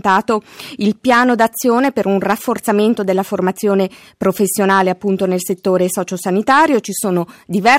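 Hard clipping runs through the whole clip. The signal was driven about 7 dB past what one stage could pass, so roughly one percent of samples hit the ceiling and were cut flat. Those flattened peaks add high harmonics, heard as crackle on louder moments.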